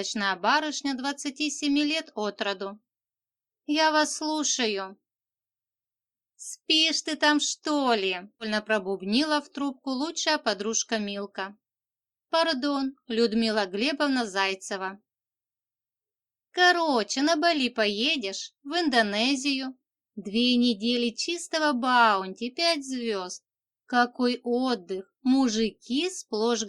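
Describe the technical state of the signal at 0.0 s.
At 0.0 s the signal is intact, with no dropout, clipping, glitch or other fault to be heard.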